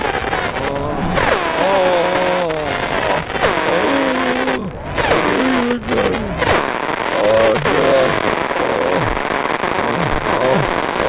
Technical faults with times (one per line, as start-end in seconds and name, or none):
none